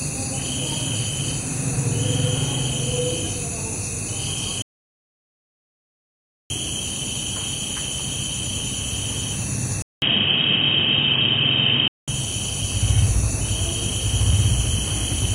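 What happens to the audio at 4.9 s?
At 4.9 s the sound has dropped out completely. This is an audio dropout to silence. It runs from 4.62 s to 6.50 s, so about 1.88 s of audio is missing. The sound stops abruptly mid-flow and resumes just as suddenly. The gap holds silence, with no background or room tone at all. The input feed was likely lost for that stretch, and the recording carried on writing silence. Whatever sounded during the gap is gone.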